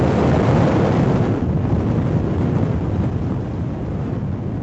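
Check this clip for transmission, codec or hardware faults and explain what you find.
Nothing stood out on listening to these sounds, whose top end stops at about 8 kHz, as expected from an ordinary call's processing and Opus coding.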